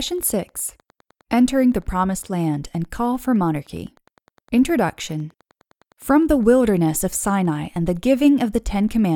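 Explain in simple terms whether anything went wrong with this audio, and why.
Running under the speech for the whole clip is a faint, steady ticking, about ten ticks a second. That's Wi-Fi interference: a nearby Wi-Fi radio sends a regular beacon every 102.4 ms, and the audio circuitry picks it up and turns it into audible clicks.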